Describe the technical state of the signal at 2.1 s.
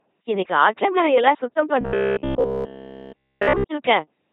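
At 2.1 s the speech is passing through an LPC-10 vocoder at 2.4 kbit/s, with heavy coding damage. Each instant is synthesised as either pulse-driven buzz or noise, so it sounds mechanical. Unlike a buffer fault, its buzz still tracks the talker's pitch.

From 1.81 to 3.65 s, just after "இன்னைக்கு ஆற்றங்கரை எல்லாம் சுத்தம்", there is robotic sound from repeated short buffers. Essentially all the audio is made of repeated short chunks, likely from audio arriving too seldom, which fits a 15 ms buffer. That gives a rigid 66.7 Hz metallic buzz.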